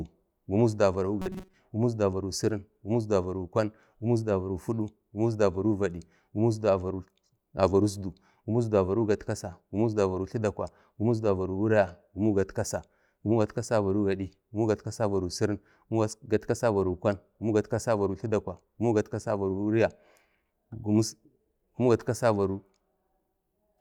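From 1.22 to 1.54 s, just before "gumuk isdu avaro sirin", robotic sound from repeated short buffers. Likely audio starvation, looping about 5 ms chunks, giving a metallic 188 Hz buzz.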